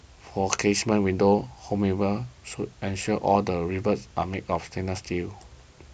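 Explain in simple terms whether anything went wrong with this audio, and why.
Nothing went wrong here: the speech comes through with no technical faults to be heard anywhere in the recording.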